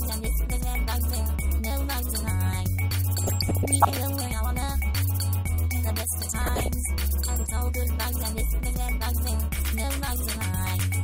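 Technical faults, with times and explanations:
3.18–3.98 s and 6.42–6.68 s, DAB burbling: the programme is overlaid by burbling noise blips, longer in the first burst and a short flare in the second. The reception was weak enough that roughly 0.5 and 0.4 percent of bits arrived wrong, and these slipped past error correction into the MP2 audio data. Corrupted samples then put short blips of noise into single sub-bands, which produces the gurgling effect.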